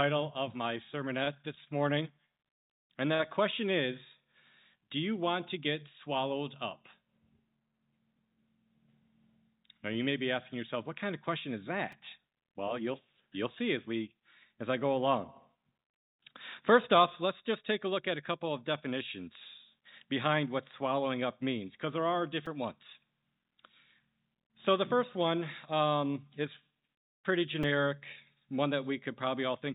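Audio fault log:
1.24–1.29 s, 1.64–1.69 s, 3.15–3.21 s: short stall from a late packet. Each time a packet arrived late and the jitter buffer ran dry. The receiver held the last sound to fill the gap, for 29 ms, 27 ms and 44 ms. Then playback resumed from the same point. Nothing is lost. Instead a sound lingers a moment too long, with a slight buzz or dip. The longest hold is at 3.15 s.
11.92 s, 22.46 s, 27.63 s: repeated buffer. New audio was not ready in time, so the device played the last short block again. The repeats fit a buffer of about 5 ms. At 11.92 s and 27.63 s it plays twice. At 22.46 s it plays three times. Each repeat has a hard join, and roughly 5 to 10 ms of audio is lost. The blocks are so short that each event sounds like a click or brief buzz, not a stutter.
26.23–26.72 s: jitter buffer speed-up. Too much audio had built up in the buffer, so the receiver trimmed it back. 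It cut out many tiny pieces, each one or a few pitch periods long, in quick succession. About 40 ms was removed over half a second. Playback ran at 107% speed while the pitch stayed the same, so this stretch sounds slightly hurried.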